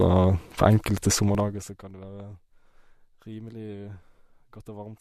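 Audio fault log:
1.15–1.86 s, zipper noise: the level drops by roughly 25 dB in 1 dB steps, about twenty per second, with nothing smoothing the jumps between them. Each step leaves a tiny click, so the fade sounds like fast ticking riding on the speech.
1.35 s, overlap between stream segments: two segments carry overlapping time stamps, and the player trims audio that was never actually duplicated. A few milliseconds vanish and the waveform jumps, heard as a brief click or skip, consistent with a 4-second segment boundary.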